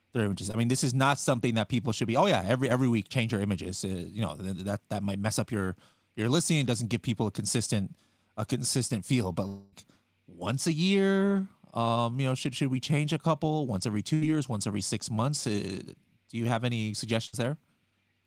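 At 0.51 s, between "their images" and "mean this is not", there is a quick smear lasting a few hundredths of a second. This is short concealed packet loss: about 20 ms of audio arrived too late, and the receiver covered the hole by extending the preceding sound.

From 9.47 to 9.74 s the sound turns into a buzz and hiss that fades over about a quarter second, then the speech picks up further on with roughly 260 ms gone. This is likely a long network dropout, with the receiver continuing the last sound throughout and never falling to silence.

Just before "once every six months", from 14.14 to 14.31 s, a fading fill replaces about 80 ms of speech. After "do you have any", at 17.27 to 17.34 s, a similar 60 ms gap is filled the same way. Both are a burst of packet loss, with consecutive packets missing and the receiver stretching and attenuating the last sound until real audio returned.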